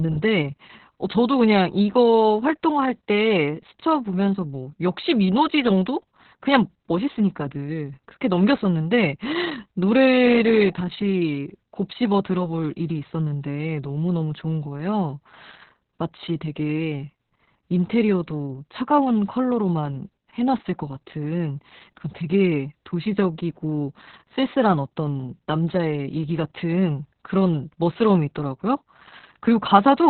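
Throughout the clip, Opus voice compression is running in its SILK speech coder at a very low rate, consistent with roughly 6 kbps, narrowband. Nothing survives above 4.2 kHz, so the speech sounds muffled, and the coarsely coded excitation makes it hoarse and faintly robotic.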